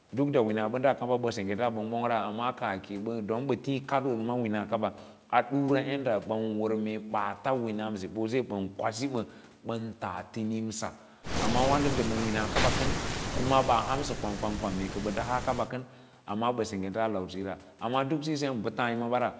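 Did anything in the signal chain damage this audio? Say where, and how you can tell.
No, nothing in the signal chain damaged this audio.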